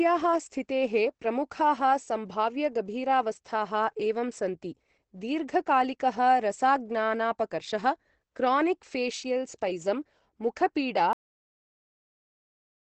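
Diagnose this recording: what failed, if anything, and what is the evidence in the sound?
The speech is muffled and hoarse throughout, with nothing above 8.5 kHz. This is likely Opus compression at the codec stage, with the encoder in its speech-oriented SILK mode and wideband bandwidth, which fits a low bitrate around 12 kbps. The damage is heavy. Unlike MP3 damage there is no swirling or watery band-hole texture. Unlike a simple low-pass filter, the remaining band itself sounds rough and reshaped, as the encoder models the signal cheaply instead of keeping its detail.

The recording has a cut-off end at 11.13 s, right after "क्रोनिक् फेशियल् स्पैजम् मुखपीडा". The sound stops mid-stream and drops straight to digital silence with no decay, and that silence lasts to the end. This points to the storage or buffer stage: the final buffers were never written, so the tail is simply missing. A dropout would resume afterwards, and a deliberate edit would fade. 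Here the signal ends abruptly and never returns.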